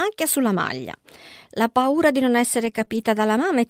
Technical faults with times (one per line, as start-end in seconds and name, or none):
1.81-3.02 scattered short gaps